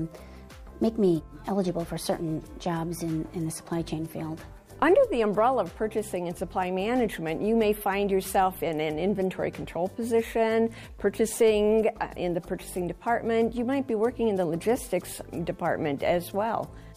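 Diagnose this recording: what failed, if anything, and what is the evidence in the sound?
Nothing in the signal chain has failed: the recording holds together as continuous, undisturbed audio throughout, with no event at any point that would implicate the wiring, conversion, buffering, processing, network or playback stages.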